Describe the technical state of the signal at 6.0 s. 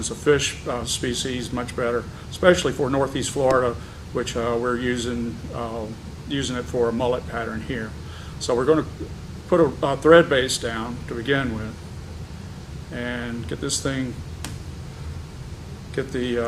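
At 6.0 s the signal is intact, with no audible fault at that point.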